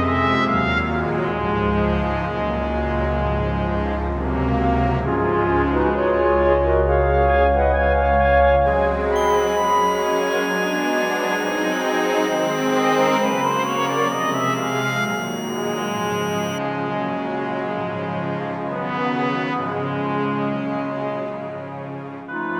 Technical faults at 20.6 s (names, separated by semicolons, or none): none